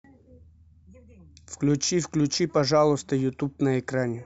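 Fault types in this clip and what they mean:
No technical faults are audible in this speech clip.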